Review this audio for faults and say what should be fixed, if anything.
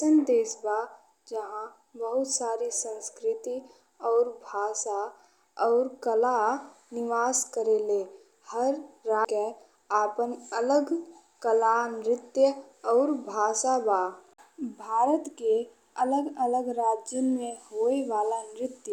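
Faint, regular ticks run through the speech from 0.15 s to 18.84 s. They come about every tenth of a second, roughly 200 in all. These are clock slip clicks. The likely cause is two devices running on separate clocks that disagree by around 300 ppm. Each time the drift reaches a full sample, one sample is dropped or repeated. That single-sample jump makes each tick. Lock both devices to one word clock, or resample at the boundary.

At 9.25 s there is a CD skip. A brief mute of a few milliseconds is heard as a tick. The audio then resumes from a different spot on the disc. A knock or a flaw on the disc made the laser jump to another turn of the spiral. The player muted while it found its place and then carried on from there. Rip the disc again with a secure, error-checking ripper and inspect the disc for damage.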